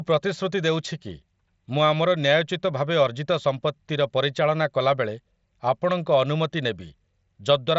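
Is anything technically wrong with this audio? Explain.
No, nothing's wrong here: the speech simply comes through a Bluetooth mSBC headset codec working as intended, with everything stopping at about 7.7 kHz, which is just the bandwidth that wideband headset link carries.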